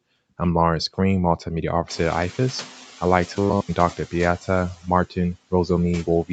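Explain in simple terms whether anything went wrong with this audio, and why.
Two things went wrong. The first is the noise suppressor catching up. Around 2 seconds the room's background noise suddenly got louder, and the noise reduction needed almost a second to adjust. So from 1.88 to 2.8 s the noise comes through louder, then fades back down.

The second is robotic sound from repeated short buffers, from 3.36 to 3.71 s. New audio likely arrived too seldom, so the call software kept replaying its last tiny slice of sound, which fits a 10 ms buffer. This turns the speech into a stiff, metallic 100 Hz buzz.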